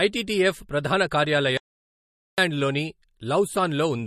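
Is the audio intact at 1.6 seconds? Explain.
No. A playback stall spans 1.57 to 2.38 s, likely because the player ran out of data or its thread was blocked, so output halted until it recovered. The sound stops mid-flow and leaves about 0.81 s of silence around 1.6 s.

That moment also carries MP3 compression, which runs through the whole clip. The damage is plainly audible and fits a low bitrate around 40 kbps. Starved of bits, the encoder likely dropped weak frequency lines frame by frame and removed everything above 13.6 kHz, giving a watery, swirly sound with smeared attacks.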